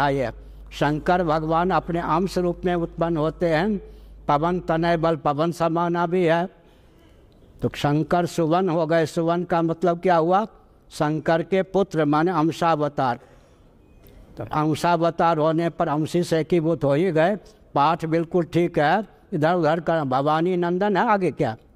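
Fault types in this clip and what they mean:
Mains hum: a steady 50 Hz tone with a few low harmonics, coupled in from the power line, sits roughly 20 dB below the signal from 0 to 5.1 s. Its fixed pitch and constant level set it apart from irregular, broadband low rumble.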